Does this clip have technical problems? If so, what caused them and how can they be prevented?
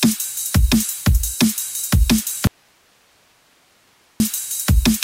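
Yes. An audio dropout to a faint residue runs from 2.47 to 4.2 s: the sound cuts abruptly, leaving only hiss roughly 40 dB down, likely from a momentary signal-path break upstream. Secure cables and connectors and monitor input continuity during recording.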